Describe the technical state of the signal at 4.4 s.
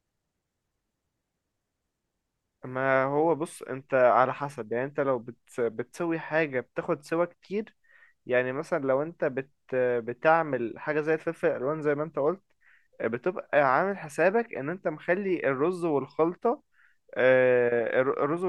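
At 4.4 s the speech signal is intact, with no audible technical fault at that moment.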